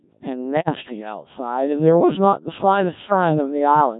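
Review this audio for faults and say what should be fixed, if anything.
The speech sounds robotic and buzzy throughout, with heavy damage. This is the Codec 2 vocoder, which fits its 1.3 kbit/s mode. It sends only pitch, voicing, energy and a coarse spectral envelope, and the decoder rebuilds the voice from sine waves rather than the original waveform. To prevent it, record or relay over a higher-rate codec that keeps the waveform.

From 0.60 to 0.69 s the voice briefly warbles and lurches in pitch, level and tone colour. These are bit errors on digital voice radio: a few percent of bits flipped near the edge of coverage, corrupting what sounds like about two vocoder frames, each of which sets a whole frame's parameters. To prevent it, improve signal strength or add stronger forward error correction on the link.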